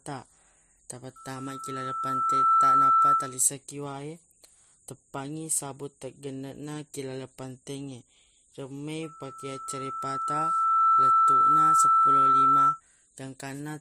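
From 1.16 to 3.42 s, and again from 9.03 to 12.81 s, loudspeaker feedback squeal rises over the speech, ending just before "ki wae" the first time. The microphone is re-amplifying its own loudspeaker, and around 1.3 kHz the loop gain passes unity, so that tone swells over roughly one and a half to two seconds until it sits about 15 dB above the speech. A spectrogram shows a single bright horizontal line at 1.3 kHz, and the waveform's envelope climbs steadily as each event builds up.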